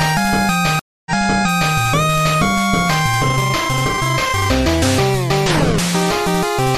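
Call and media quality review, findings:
Stream reconnect, 0.79 to 1.76 s: 265 ms dropout, then playback resumes 0.70 s earlier as the server resends a burst; fresh decoder, first frame fades in.

DC step, 2.15 s: sudden baseline offset heard as a low thump, decaying away as a 5 Hz high-pass pulls the zero line back.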